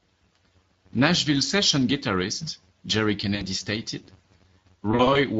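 From start to end, a steady buzz at about 93.8 Hz rides under the speech. It comes from a filter restarted on every block. The filter drops its memory at each block boundary and begins again from silence. Each restart leaves a small transient. These repeat at a rate that fits a 512-sample block. The buzz grows louder with the speech and sinks when it goes quiet.

The whole clip also carries Speex codec damage, and it is plainly audible. Speex is a CELP speech codec that has little room for the excitation signal at low quality settings. The speech sounds noisy and hoarse. Its texture is rough and grainy. The degree of damage points to a middling bitrate, roughly 20 kbps.

At 3.35 s there is VoIP packet loss concealed by the speech codec. About 60 ms is missing, up to 3.43 s. The decoder fills the gap by repeating its last pitch and filter and lowering the gain each time. The speech smears into a stretched sound that fades. 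Each frame builds on the one before, so it stays weak for a moment after packets return.

From 4.91 to 5.20 s the same packet loss concealment returns. About 120 ms is lost, scattered over 280 ms. No single run of loss lasts longer than 40 ms. The result is a broken stretch where short, fading fills break up the speech.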